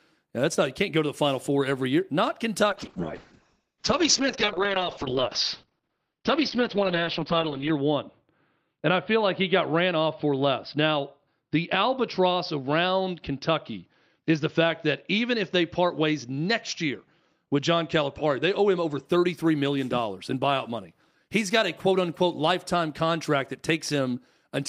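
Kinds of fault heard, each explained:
Call bitrate drop: From 2.71 s to 19.11 s the encoder's bit budget collapses, consistent with a fall from about 32 kbps to 7 kbps. The audio coarsens and loses everything above 6 kHz, sounding muffled and rough, worst for about 5 s, until recovery before "million dollars in buyout".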